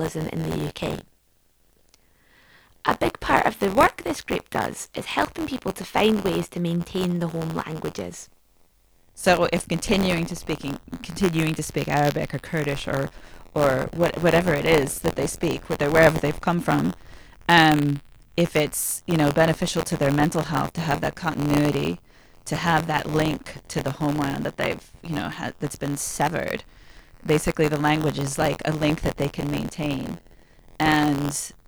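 Buffer tearing runs throughout: a small slice of each buffer replays audio about 20 ms old, producing a robotic 86 Hz buzz, which fits a 512-sample buffer.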